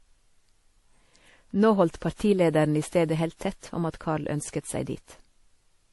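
Across the whole speech clip, nothing sits above about 11.5 kHz, and the artefacts carry two distinct textures at once rather than one consistent compression character. That layering is what separates it from a single low-bitrate encode. The likely cause is transcoding between lossy codecs, with a WMA-style encode at a moderate rate followed by MP3 at a lower one, each stage stacking its own artefacts onto the last.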